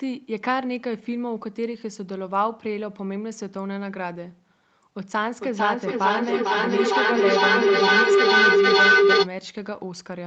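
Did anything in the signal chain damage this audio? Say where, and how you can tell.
Yes. A feedback howl runs from 5.39 to 9.3 s, an acoustic loop between two devices on the call. A tone near 400 Hz builds until it peaks about 10 dB above the speech, pulsing roughly every half second as each trip adds gain.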